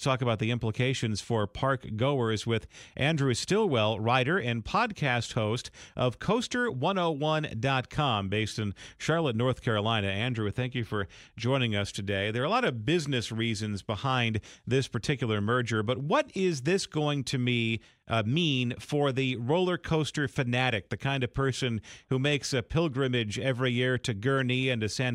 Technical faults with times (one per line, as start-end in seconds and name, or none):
none